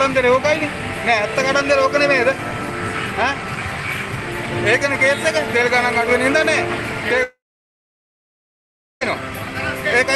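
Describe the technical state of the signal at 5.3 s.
At 5.3 s the signal is intact, with nothing beyond the ordinary character of the call path, whose Opus coding limits the top of the band to about 12 kHz.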